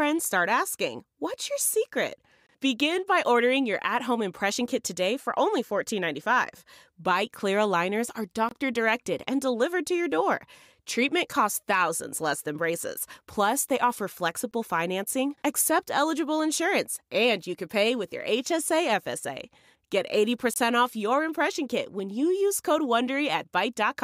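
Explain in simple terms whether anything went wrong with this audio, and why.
Brief, hard-edged holes of 23 ms break the speech at 2.47, 8.49, 14.51 and 20.54 s. This is a gap between chunks: silence is left at each 6-second join.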